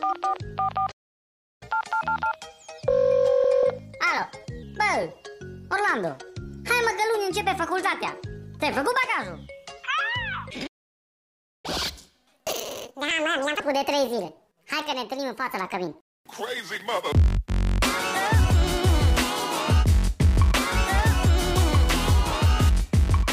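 At 0.91 s the sound halts for about 0.70 s, until 1.63 s: a playback stall, likely the player starving for data or its thread blocking. From 1.63 to 4.63 s comes catch-up at higher speed, at 1.15 times normal, raising pitch by about two semitones. Tempo and pitch rise together, then settle back, which a plain pitch shift would not do. At 10.66 s a second stall silences the output for about 0.97 s, likely from the same cause. The catch-up that follows, from 11.66 to 13.60 s, is much faster: 1.5 times speed, with pitch raised by roughly seven semitones.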